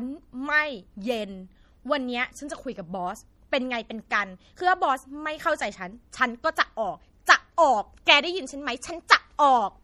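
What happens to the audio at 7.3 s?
At 7.26 s a sharp attack arrives with a brief pre-echo. A hiss of about 14 ms sits just ahead of the onset, and the attack itself sounds softened and smeared. The codec spreads its quantisation noise across a whole transform block. Here the attack falls late in that block. So noise scaled for the loud part also fills the near-silent gap before it, where nothing masks it.

The pre-echo rides on damage that runs through the whole clip. The speech has a watery, swirling quality. S sounds carry metallic chirps. The likely cause is MP3 compression at a low bitrate, and the level of damage fits something around 48 kbps. With bits that scarce, the encoder zeroes weak frequency lines. Those lines then switch on and off between frames, which produces the swirl.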